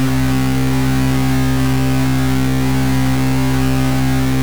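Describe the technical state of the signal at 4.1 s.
At 4.1 s the music shows low bit depth without dither, present throughout: truncation to likely only 3 bits leaves grainy, signal-following distortion roughly 10 dB below the music.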